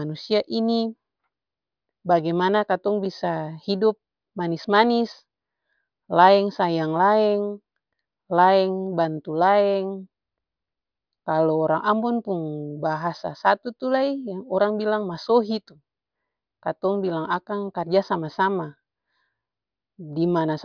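Speech recording with no technical faults detected at any point in the clip.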